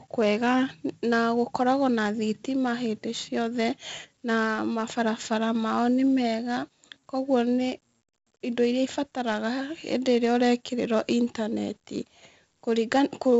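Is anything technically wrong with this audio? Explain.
Yes. The whole clip carries heavy 4-bit ADPCM compression. Each sample is coded as a coarse 4-bit step from a predicted value, with the step size adapting as the speech moves, so the error is a broadband noise that rises and falls with the level of the speech. It is heard as a gritty hiss riding on every louder syllable, with roughened consonant onsets where the step cannot grow quickly enough. Nothing reaches above about 7.7 kHz, which fits a 16 kHz sample rate, or roughly 64 kbps at 4 bits per sample, and dulls the top end.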